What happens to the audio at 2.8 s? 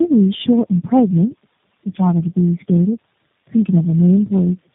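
At 2.8 s, as across the whole clip, tandem speech coding: the speech passed through three low-rate coders in turn, AMR-NB, iLBC, then G.729A, each re-coding the last one's damage. It sounds rough, muffled and warbly. A spectrogram shows nothing above 3.8 kHz and smeared, blurry formants.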